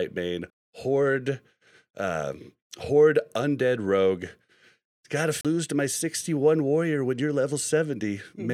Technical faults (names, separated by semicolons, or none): CD skip